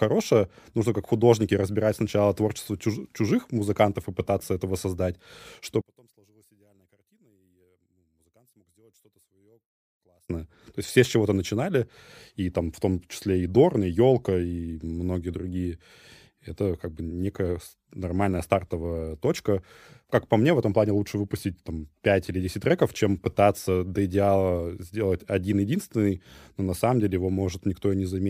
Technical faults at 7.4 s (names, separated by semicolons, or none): one channel inverted